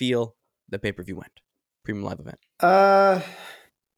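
Speech recording, with no technical fault to be heard anywhere in it. Nothing in the sound points to a problem in how it was captured, processed or played back.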